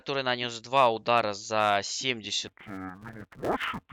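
From 2.47 s to the end of the speech, interleaved audio is read as planar: each 5.33 ms block's alternating left and right samples get split into halves. The short blocks make it dull and robotic, buzzing at 188 Hz, with no octave drop as a rate error would cause.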